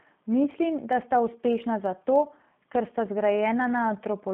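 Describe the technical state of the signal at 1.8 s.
At 1.8 s the signal passes through a G.729 codec, here the G.729A variant, as it does for the whole clip. The speech is rebuilt from a vocal tract model, a pitch predictor and a few pulses per frame, consistent with an 8 kbit/s stream. At this moment the line band sits at roughly 150 Hz to 3.5 kHz, with nothing above 3.5 kHz. The codec damage is plainly audible: the speech sounds rough, synthetic and muffled.

A block size mismatch (truncated) is also present at 1.8 s and across the whole clip. One stage writes longer blocks than the next reads, and the surplus at the end of each block is discarded. The periodic cut produces a buzz at 43.1 Hz, which fits blocks of 1024 samples at a 44.1 kHz rate. The discarded portion is small enough that the speech still plays at its normal speed and pitch.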